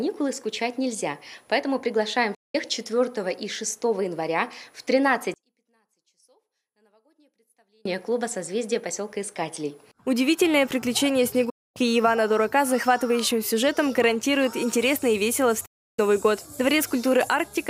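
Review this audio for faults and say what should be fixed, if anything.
Digital broadcast dropouts cut the sound three times: 2.34 to 2.55 s, 11.50 to 11.77 s, and 15.66 to 15.99 s. Each time the receiver stopped getting valid frames and muted, fading out in about 8 ms, then resumed once good data returned. Roughly 0.19, 0.26 and 0.32 s of programme are gone, which fits whole frames of about 32 ms being dropped. On a waveform these show as flat gaps with very short ramps at their edges. A spectrogram shows full-height vertical blank strips. Preventing this means improving reception (antenna placement, signal margin, or a stronger multiplex) or recording from a wired or IP feed instead of off-air.

From 5.34 to 7.85 s the whole sound, background included, drops by about 40 dB and then comes back. The likely cause is one channel inverted: one stereo channel had reversed polarity, so the material common to both channels cancelled when they were summed to mono, leaving only the small difference between them. 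On a waveform this looks like a sudden narrow band between full-level sections. A spectrogram shows the same stretch dimmed across all frequencies. Preventing it means checking polarity on both channels and running a correlation or mono-compatibility check before the downmix.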